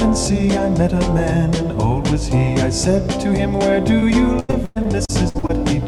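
Short concealed packet loss, 3.99 to 4.04 s: about 20 ms of audio arrived too late, and the receiver bridged it by extending the preceding sound, leaving a brief smear.

Repeated packet loss (robotic sound), 4.40 to 5.62 s: holes of up to 110 ms recur, with about 35 percent of the stretch patched by continuation, giving choppy sound with missing pieces.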